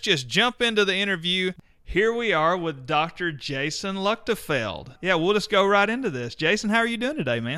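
No technical faults can be heard at any point in the speech, so there is nothing to describe in time order.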